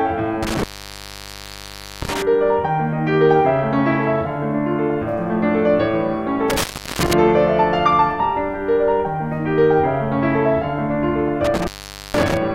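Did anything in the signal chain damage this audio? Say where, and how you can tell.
Yes. Intermittent contact in the analogue wiring breaks the music three times: from 0.43 to 2.22 s, with the line open for about 1.38 s; from 6.50 to 7.13 s, open about 0.36 s; and from 11.45 to 12.37 s, open about 0.47 s. Each time the sound cuts out with crackle at the edges, leaving faint hiss. A loose cable or plug is briefly losing its connection and then scraping back into contact.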